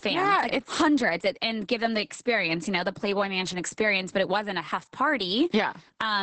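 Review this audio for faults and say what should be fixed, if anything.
Opus voice compression runs throughout the clip. The speech has nothing above 8.7 kHz and sounds muffled, hoarse and slightly robotic, because the SILK linear-prediction coder is coding the excitation very coarsely, which fits a bitrate of around 10 kbps. To prevent it, encode at a higher Opus bitrate or keep a lossless source for delivery.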